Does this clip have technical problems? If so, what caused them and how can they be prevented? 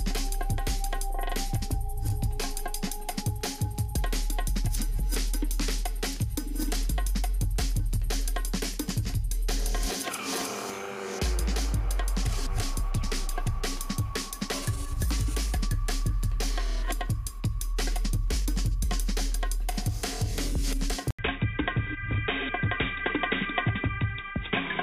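Yes. From 21.1 s to the end, an 80 ms gap precedes a duller, narrower sound with nothing above 3.8 kHz, a new noise floor roughly 40 dB down and little level change, which points to the input likely being switched to a poorer device. Locking the recording input to one device prevents this.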